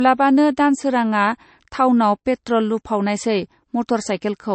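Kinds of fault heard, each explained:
Low-bitrate audio saved at a high bitrate: The speech has nothing above 8.3 kHz for the whole clip, so it sounds dull and muffled. The cut-off is sharp and steady, like an MP3 encoder's. The likely cause is an earlier low-bitrate MP3 pass, around 36 kbit/s, later saved again as a much larger MP3. The second encoding cannot bring back the missing top end. The narrow band and coarse texture from the first pass remain.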